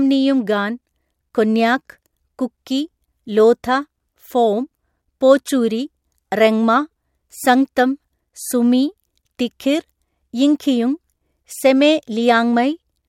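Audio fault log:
5.46 to 5.50 s, corrupt frame decoded: a loud glitch over a couple of damaged frames, where misread codes put energy at the wrong frequencies. Unlike a dropout or concealed loss, it adds sound rather than muting or smearing it.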